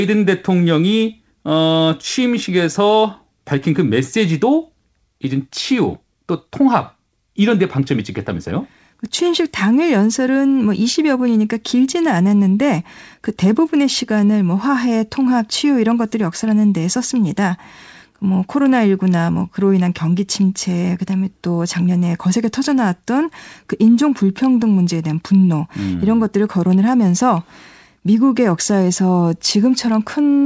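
Nothing here counts as a fault: the speech arrives intact over what sounds like an ordinary call connection, with the top end stopping around 8 kHz in a way that fits a wideband codec such as G.722.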